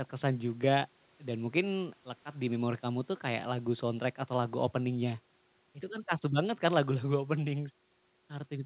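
No faults to report: the speech is band-limited at 4 kHz, consistent with a G.711 mu-law call path, and that ceiling is expected behaviour for such a link.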